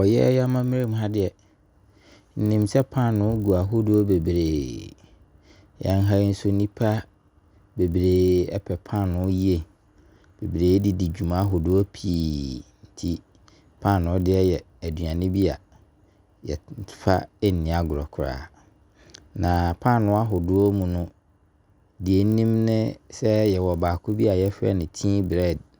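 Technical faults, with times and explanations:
Throughout, resampler restarted on every block: the conversion, which fits 24 kHz to 48 kHz, treated each 20 ms block separately. Each block edge lacked its true neighbouring samples, leaving a small error every block and a 50 Hz buzz that rides on the speech.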